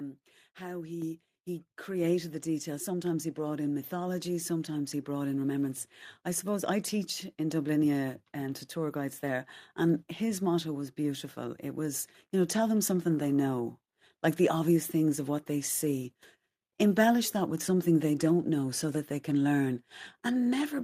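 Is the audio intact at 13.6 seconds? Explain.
Yes, at 13.6 seconds the speech runs through cleanly, with no dropout, click, distortion or other fault audible at that moment.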